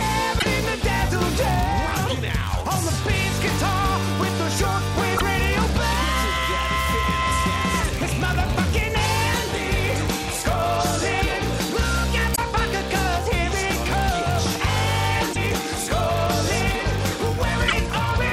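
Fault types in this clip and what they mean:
Block size mismatch (padded): Each block written is slightly shorter than the block read, so a brief run of zeros fills every block. A buzz at about 99.6 Hz runs throughout, and the audio plays 0.996 times as fast at nearly its usual pitch. Spectrograms show evenly spaced vertical striations, and waveforms show regular tiny flat gaps.
Damaged data in a compressed stream: Corrupt frames make the decoder misread data and resynchronise, producing short chirps or blips at 0.35–0.45, 5.14–5.21, 12.32–12.39, 15.30–15.37 and 17.67–17.73 s. A spectrogram shows brief blocky or smeared patches, and a waveform shows abrupt bursts or discontinuities.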